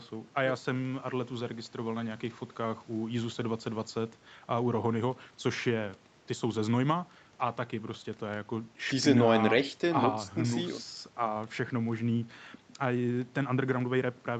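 No technical faults occur at any point in this speech; the call processing and codec path work as they normally do.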